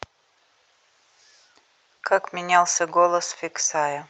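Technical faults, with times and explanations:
1.97 to 2.03 s, short concealed packet loss: about 40 ms of the speech didn't reach the decoder in time, so the receiver covered the gap by stretching out what it had just played, carrying the pitch forward through voiced sound or shaped noise through unvoiced, then blending back into the real signal. That's why you get a quick smear or wobble right there, riding on the call path's Opus coding with nothing above 8 kHz.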